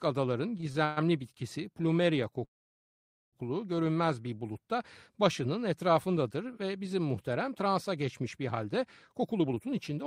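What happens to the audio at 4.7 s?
Nothing goes wrong at 4.7 s; the speech carries on intact through that moment.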